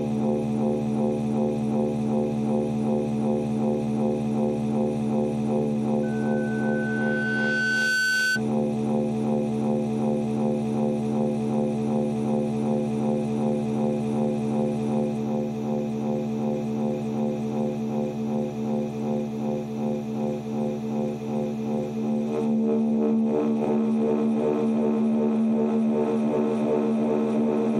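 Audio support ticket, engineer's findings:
Loudspeaker feedback squeal, 6.03–8.41 s. Single steady tone at 1.5 kHz, swelling over roughly two seconds until it's about as loud as the surrounding audio. Mic–loudspeaker path: mic picking up its own monitor or PA, loop gain above unity at 1.5 kHz, tone self-reinforcing until the loop is broken. Check mic placement, monitor level, notch at 1.5 kHz.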